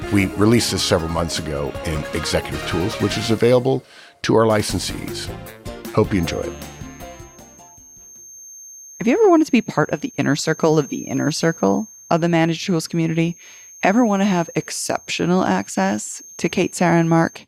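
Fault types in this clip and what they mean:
Feedback whistle: a thin, single-pitch 6.4 kHz tone from 6.05 s to the end, about 25 dB under the sound, likely a loudspeaker-to-microphone loop held just short of runaway. A spectrogram shows one unbroken horizontal line; the waveform barely changes.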